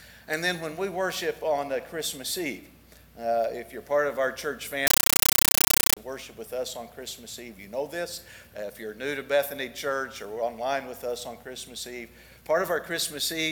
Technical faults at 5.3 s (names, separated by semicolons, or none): compressed stream played as audio